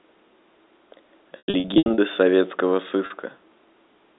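Packet loss with pitch repetition hits this telephone-band speech from 1.38 to 1.98 s, where about 360 ms goes missing in bursts of up to 100 ms, and again at 3.06 to 3.10 s for 40 ms. Each gap is bridged by repeating the last pitch period, giving a held, buzzy tone that fades into silence on longer runs before a brief cross-fade back.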